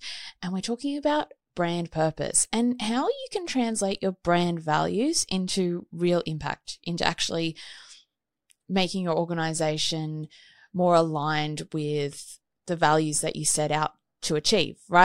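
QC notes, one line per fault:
No faults found in this speech recording.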